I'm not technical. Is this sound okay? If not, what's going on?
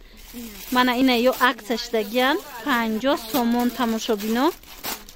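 No. Audio missing between chunks, at 1.02 and 3.00 seconds: two tiny skips, each losing about a hundredth of a second. They come two seconds apart, likely because the recorder handles sound in two-second pieces and drops a sliver at each join.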